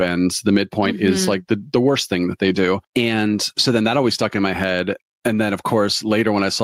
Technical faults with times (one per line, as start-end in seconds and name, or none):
0.00-6.63 gain pumping